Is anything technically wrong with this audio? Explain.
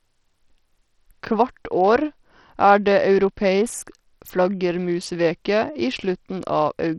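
Yes, there's heavy coding damage running through the whole speech clip, and it sounds like Bluetooth SBC compression is the likely cause. The top end is cut off with nothing above 17.2 kHz, and what treble remains thins out and flickers, with a gritty, grainy edge riding on the voice. SBC splits the signal into frequency bands and hands out bits without any real model of hearing, so at what sounds like a low bitrate, around 64 kbps, the weak upper bands starve and everything else gets coarsely quantised.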